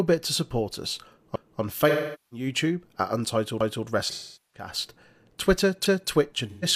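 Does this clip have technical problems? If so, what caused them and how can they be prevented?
Yes. The speech has overlapping chunks at 1.36–1.61 s, 3.61–3.86 s and 5.86–6.11 s. Each join replays a 250 ms stretch of audio, so a click or stutter recurs every 2 s. This points to a chunked processing or streaming stage whose 2-second blocks each begin 250 ms before the previous block ends, with the overlap appended instead of cross-faded or trimmed. To prevent it, align chunk boundaries exactly, or overlap-add with proper windowing and discard the duplicated region.

AAC frame loss with concealment shows at 1.89–2.46 s, 4.10–4.68 s and 6.49–6.65 s. The first two gaps cover about 0.43 s of missing audio, which fits roughly ten lost AAC frames. The decoder bridges them by repeating and scrambling the last good spectrum, so the sound turns smeared and phasey, then sags in level before the signal recovers. 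The final gap is shorter, about 0.13 s, consistent with three frames, and sounds like a brief noisy smear. To prevent it, add forward error correction or retransmission, and use a larger jitter buffer on the transport.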